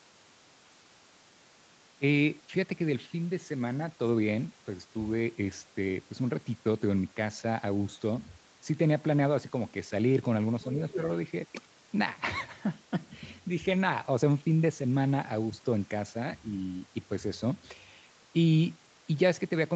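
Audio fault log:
10.91–10.97 s, other side's voice leaking through: the echo canceller likely failed to remove a scrap of the far end's loudspeaker playback from the microphone, so a brief second voice surfaces for 60 ms, sitting about 10 dB below the main speech.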